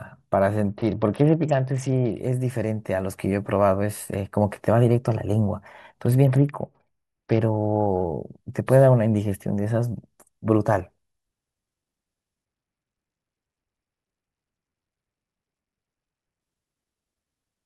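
Bluetooth SBC bit pool drops hit this speech clip three times, from 0.68 to 2.20 s, 6.25 to 7.42 s and 12.45 to 16.41 s. In each stretch the treble goes dull and a gritty, grainy noise rides on the sound. That points to the link falling from a bit pool of 31 to about 8, near 66 kbps, starving the upper sub-bands and coarsening the rest until the rate recovers.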